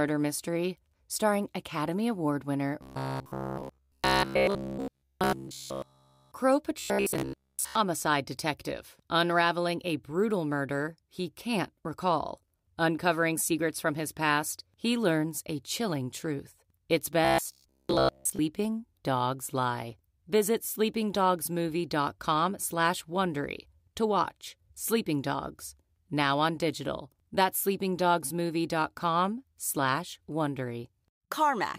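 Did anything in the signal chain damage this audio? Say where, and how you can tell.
Yes: robotic sound from repeated short buffers at 2.8–6.3 s, 6.79–7.75 s (before "detective unraveling a brutal") and 17.25–18.39 s. The 66.7 Hz metallic buzz is likely a starved buffer repeating 15 ms chunks.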